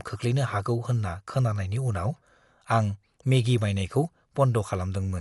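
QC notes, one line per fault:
Throughout, likely Dolby Digital compression: nothing above 11.4 kHz, so speech sounds dull, with rough fluttery noise filling bit-starved bands, fitting a 64 kbps stream.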